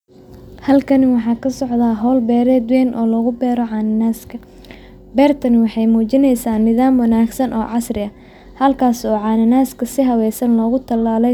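No technical faults occur anywhere in the speech, so there is nothing to describe in time order.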